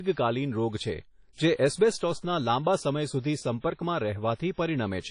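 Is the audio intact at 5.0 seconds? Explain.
No. At 5.0 s the speech carries the same damage heard across the whole clip, likely from WMA compression at a low rate, consistent with something near 32 kbps. The transform coder's quantisation noise is smeared over tens of milliseconds, so the sound rings and turns washy, with hiss that swells and fades with the signal. A spectrogram shows a hard ceiling at about 10.1 kHz with nothing above it, and patchy gaps where weak components were zeroed.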